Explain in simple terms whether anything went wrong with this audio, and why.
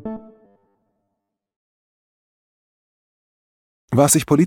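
From 0.45 to 1.57 s the sound turns into a rigid, metallic buzz, robotic sound from repeated short buffers. The likely cause is that new audio arrived too seldom, so the player kept repeating a tiny slice of about 10 ms, giving a fixed 100 Hz buzz, while roughly half the real audio was skipped. Unlike a steady mains hum, this buzz follows the shape of the sound and appears only during that stretch.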